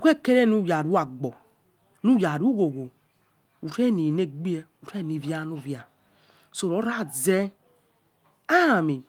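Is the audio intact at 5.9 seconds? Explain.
Yes, at 5.9 seconds the speech runs on intact, with no dropout, click, distortion or other fault at that point.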